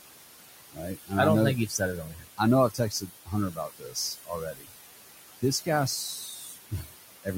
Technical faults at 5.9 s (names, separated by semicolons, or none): noise suppressor artifacts; speech cut by the noise suppressor